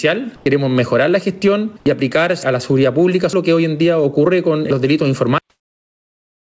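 Gain pumping runs through the whole recording. The level swings by around 10 dB as the gain rises in the pauses and drops under each loud passage, so the dynamics come out flattened. The likely cause is an input gain set far too high for the microphone, with a fast limiter or compressor clamping down every time the level peaks. Between 0.36 and 0.46 s, sound is dropped by the voice detector: roughly 100 ms is replaced by steady, featureless noise, and about 50 ms of real sound is lost in that stretch before the signal returns. This fits the sender's voice activity detection classing the sound as background and halting transmission, while the receiver fills the gap with comfort noise of the RFC 3389 kind. The final problem is a cut-off end at 5.38 s, where the audio stops abruptly mid-sound and falls straight to digital silence with no natural decay. That silence carries on to the end of the file, which points to the last buffers never having been written or played out. 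Above these faults, nothing is present beyond 8 kHz, which matches the G.722 wideband call path the audio passed through.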